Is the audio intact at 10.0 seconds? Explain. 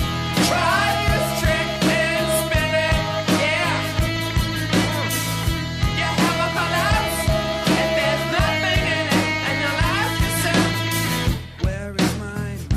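No. Hard clipping runs through the whole clip, including 10.0 s: peaks are driven about 4 dB past the ceiling and sliced flat, roughly one sample in a hundred. The result is brief crackle on loud moments, sharper and brighter than the rounded warmth of soft saturation.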